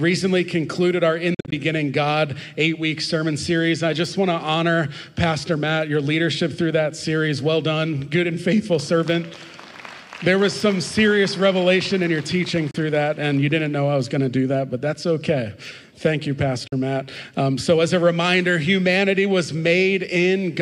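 Three short dropouts break the audio at 1.34–1.53 s (a cluster of gaps, the longest about 44 ms), 12.71–12.75 s and 16.67–16.73 s. These are likely Bluetooth dropouts: the sound resumes as if it had played on, rather than stalling and repeating.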